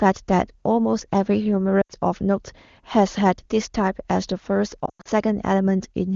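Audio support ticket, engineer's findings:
Sound dropping quickly toward near silence, 1.82–1.92 s (80 ms concealed), then fading, 4.85–5.08 s (160 ms lost across a 200 ms stretch, longest gap 100 ms). Component: radio link into AMR-WB decoder; lost AMR speech frames. Mechanism: corrupted frames discarded, decoder repeats last pitch and vocal-tract parameters with decaying gain; wideband fades quickly, speech returns briefly weak. Codec at 23.85 kbit/s shows faint or no coding damage.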